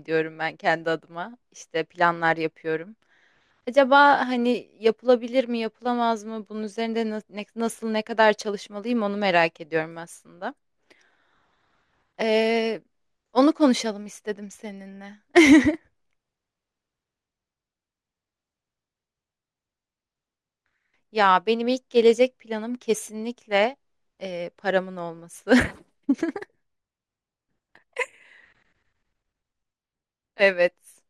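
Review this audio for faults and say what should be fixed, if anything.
A faint metallic shimmer on sibilants, with a dulled top end, runs throughout. This is imaging from linear upsampling. Straight-line interpolation left mirrored spectrum copies from 11.03 kHz to 22.05 kHz, roughly 35 dB down, which fits a conversion from 22 kHz to 48 kHz. Resample with a proper windowed-sinc or polyphase low-pass filter instead of linear interpolation.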